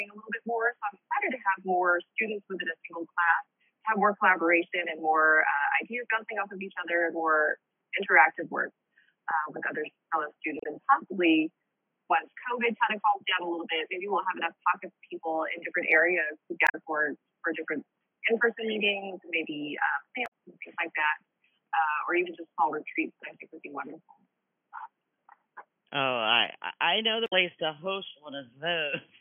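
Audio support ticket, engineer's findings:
Damaged data in a compressed stream: short chirp/blip bursts at 10.59–10.66 s, 16.65–16.75 s, 20.23–20.29 s and 27.23–27.33 s, each 50–100 ms. Component: decoder input / compressed file. Mechanism: corrupted frames misread or rejected; decoder loses frame sync and resyncs at the next header. Spectrogram: brief broadband or smeared blocks standing out from surrounding sound. Waveform: abrupt, irregular segment with hard edges at each burst.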